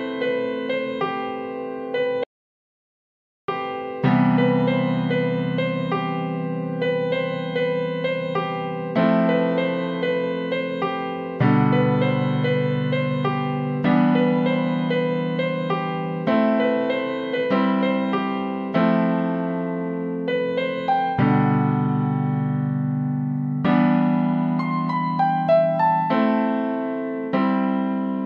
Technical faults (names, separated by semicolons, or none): audio dropout to silence